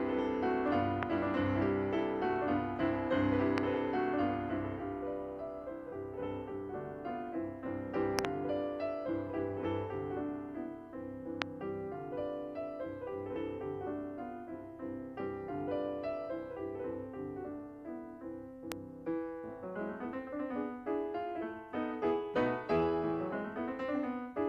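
Loud pops at 1.03–1.05, 3.58–3.60, 8.19–8.27 (a double pop), 11.42–11.44 and 18.72–18.74 s jump roughly 20 to 25 dB above the audio, which carries on underneath. Each is likely a sudden voltage pulse from a plug, switch, static or driver glitch.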